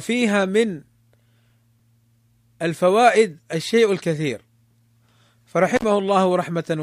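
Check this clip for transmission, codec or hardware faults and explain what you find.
One hardware fault is present, an intermittent contact near the end of the speech. From 5.76 to 5.84 s the signal drops out for about 49 ms, with brief crackle at the moments the connection breaks and remakes. A loose plug or cable conductor momentarily loses contact, so the audio path is open and only faint hiss remains in the gap before the contact closes again and the speech returns.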